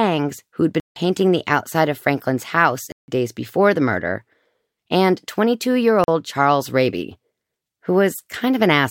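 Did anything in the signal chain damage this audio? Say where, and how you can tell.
Yes. There are blocks of digital silence at 0.80–0.96, 2.92–3.08 and 6.04–6.08 s. The speech drops out abruptly for 160, 160 and 40 ms. The output buffer was either filled too late or filled with invalid values.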